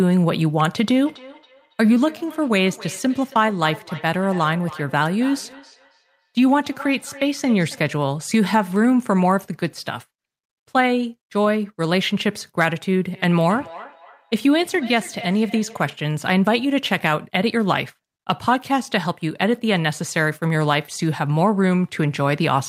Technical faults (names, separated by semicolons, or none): feedback echo between two devices